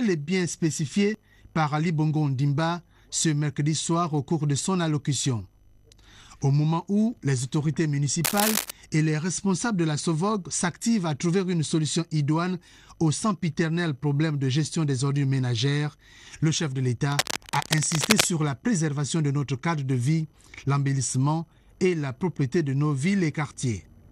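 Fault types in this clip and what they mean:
Cable scratch noise: at 8.24 to 8.71 s and again at 17.12 to 18.25 s, dense, irregular bursts of scratching and rustling sit over the sound, the first roughly as loud as the sound itself and the second, lasting just over a second, about 5 dB quieter. This is likely a worn cable, connector or control being moved, its contact resistance jumping rapidly and injecting uneven noise into the signal while it is disturbed.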